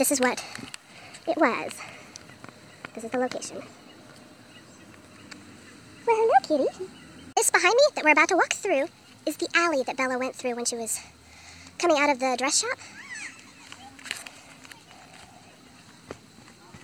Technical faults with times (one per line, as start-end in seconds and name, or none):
0.00-16.84 wrong sample rate